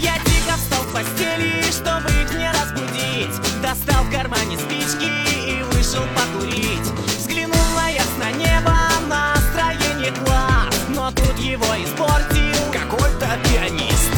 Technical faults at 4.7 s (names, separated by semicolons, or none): none